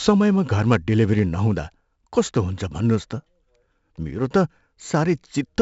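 It's a short speech clip, and the whole thing has been through 4-bit ADPCM compression, and pretty heavily. Each sample is coded as a small step from a prediction, so the coarse quantisation leaves a gritty hiss that rides along with every louder syllable, plus some crunch on sharp onsets where the step size lags behind. Nothing comes through above about 7.7 kHz, which fits a 16 kHz sample rate at 64 kbps, so it sounds dull too.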